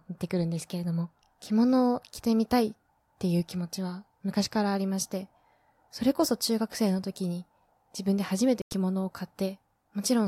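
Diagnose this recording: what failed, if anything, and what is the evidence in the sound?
At 6.99 s a corrupt FLAC frame in the stored file produces a brief click peaking at about -40 dBFS. A flipped bit threw the decoder's prediction off until the frame boundary. It shows as a thin vertical spike on the spectrogram and a tiny needle on the waveform.

From 8.62 to 8.73 s the speech drops into a hard-edged hole about 0.11 s long. This is a corrupt frame muted: the decoder rejected damaged compressed frames and the player substituted silence. The length suggests two lost frames. The spectrogram shows a blank column, and the waveform flatlines abruptly.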